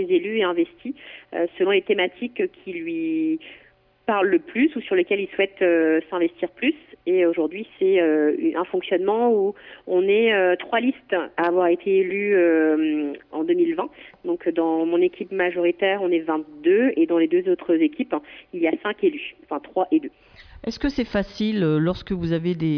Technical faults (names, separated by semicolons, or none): none